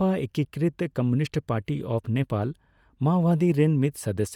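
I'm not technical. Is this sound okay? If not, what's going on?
No. From start to finish the speech carries a grainy, breathy roughness, plainly audible, that sounds like Bluetooth LC3 compression, likely from a wireless earbud or headset link. This codec chops sound into 10 ms slices and, to save data, rebuilds some detail with filler noise instead of the real thing. Unlike an old phone line, which sounds thin and muffled, this keeps its full brightness. What gives it away is the fizzy texture on top.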